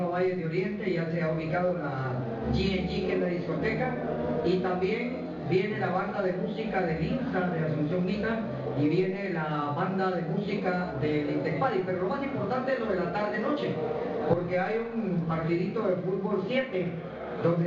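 Nothing technical stands out anywhere in this clip, so there's no fault to point to.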